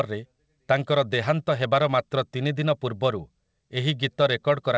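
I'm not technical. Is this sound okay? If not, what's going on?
Yes, nothing stood out on listening to this speech clip, which sounds like it came over an ordinary internet call connection that keeps everything below about 8 kHz.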